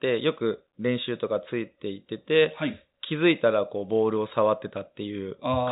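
No faults are audible in the speech, which carries the narrowband call-path character of nothing above 4 kHz, consistent with a 64 kbps G.711 mu-law link.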